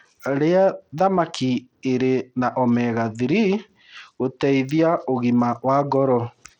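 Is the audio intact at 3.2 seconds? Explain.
No. At 3.2 seconds the speech carries the plainly audible damage of likely Bluetooth SBC compression, present throughout, which fits a bitrate near 80 kbps. Starved upper sub-bands leave flickering, patchy treble and gritty noise, seen on a spectrogram as blotchy, gapped high-frequency energy.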